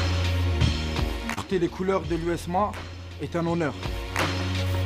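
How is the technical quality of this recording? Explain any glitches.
There's one real glitch, a short concealed packet loss from about 1.33 to 1.39 s. Roughly 40 ms of audio didn't arrive in time, and the receiver covered about 32 ms of that gap by extending the sound it had just played, then crossfaded back into the real signal. You hear it as a quick smear or wobble.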